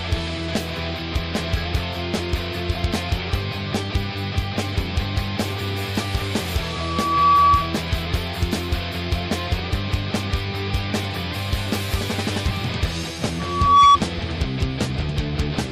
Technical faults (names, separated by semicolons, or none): loudspeaker feedback squeal